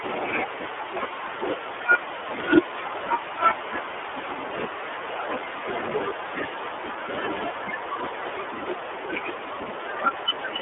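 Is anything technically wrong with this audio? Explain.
Yes. Throughout, the speech carries iLBC codec damage. Each 30 ms frame is coded alone, band-limited to 300 Hz–3.5 kHz, sounding plainly rough and synthetic.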